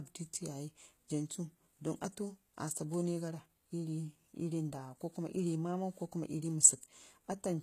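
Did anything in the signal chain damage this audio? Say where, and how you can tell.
Yes, at the codec stage, and it runs through the whole clip. The treble sounds synthetic, the s sounds are gritty and metallic, and nothing gets past about 14.9 kHz. That's likely HE-AAC compression, rebuilding the top end from copied lower bands, at a rate around 20 kbps.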